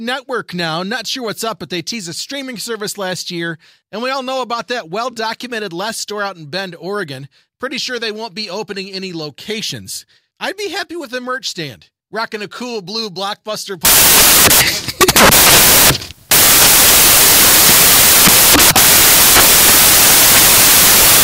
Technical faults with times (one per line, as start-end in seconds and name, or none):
13.85-21.24 samples built from the wrong bytes